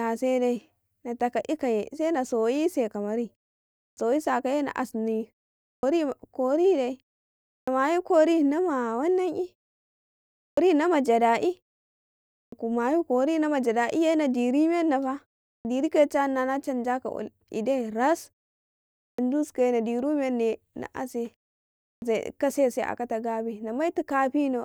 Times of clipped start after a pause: 3.88-3.97, 5.74-5.83, 7.58-7.67, 10.47-10.57, 12.42-12.52, 15.55-15.65, 19.09-19.18, 21.92-22.02

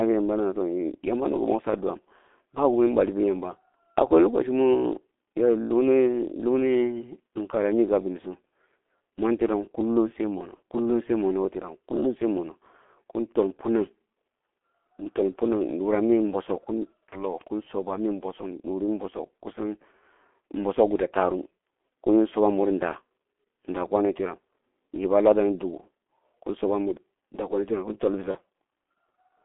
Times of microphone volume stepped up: none

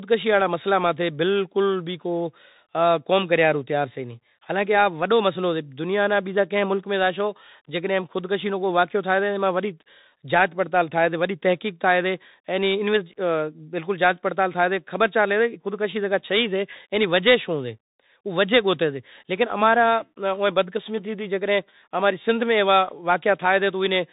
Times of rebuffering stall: none

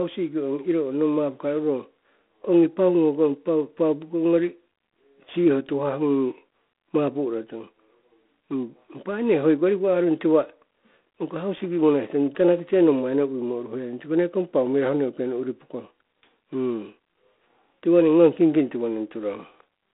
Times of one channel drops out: none

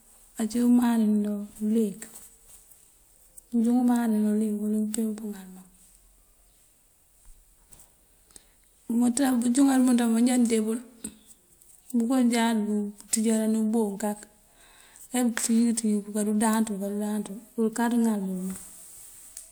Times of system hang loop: none

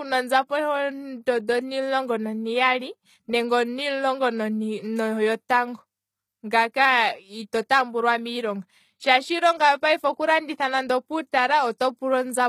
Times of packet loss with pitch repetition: none

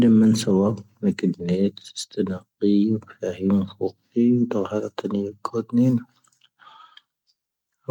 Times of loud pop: none

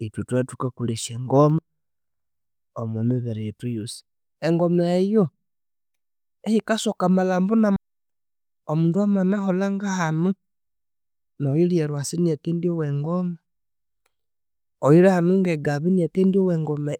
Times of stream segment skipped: 7.76

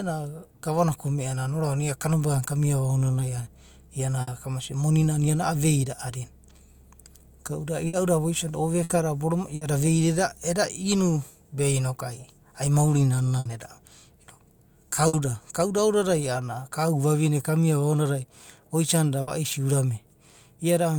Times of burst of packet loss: 4.21-4.30, 7.87-7.96, 8.83-8.92, 9.55-9.64, 13.39-13.48, 15.07-15.16, 19.21-19.30

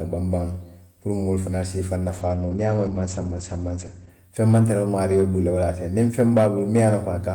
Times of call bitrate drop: 2.07-4.17

